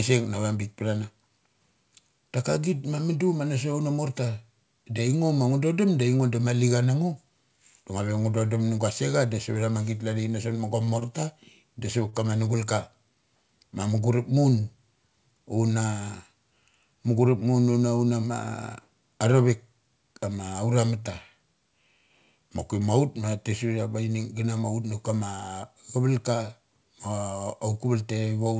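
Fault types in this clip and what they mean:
Short stall from a late packet: The speech briefly hangs, with a sound held a little too long and a faint buzzy smear, three times: 10.85–10.89 s, 10.99–11.03 s, and 12.09–12.15 s between "da savat" and "kama nugul". Each time a packet arrived late and the jitter buffer ran dry, so the receiver stretched the last sound for about 26, 17 and 37 ms, then resumed from the same point. Nothing is lost, but the delay grows.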